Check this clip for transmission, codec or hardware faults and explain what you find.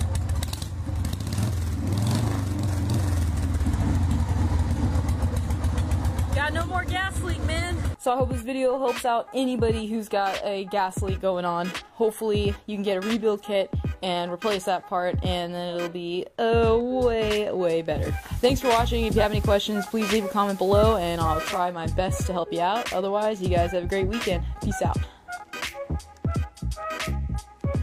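One fault: digital radio blending to analogue, from 17.89 to 21.76 s. The receiver lost its digital signal and cross-faded over 335 ms to the station's FM broadcast, then back. The analogue stretch carries hiss about 25 dB below the sound and shifts level by about 3 dB.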